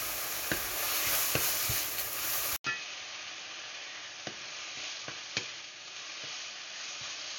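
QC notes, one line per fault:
2.56 s to the end, input switched to a poorer device: after an 80 ms gap the sound drops about 10 dB and goes dull and boxy, with nothing above 6.7 kHz, and a new noise floor comes in roughly 30 dB under the signal. That narrow band plus a fresh level and noise floor is most likely the recording input jumping mid-take to a lesser mic or a headset's call profile, which brings its own bandwidth, gain and background.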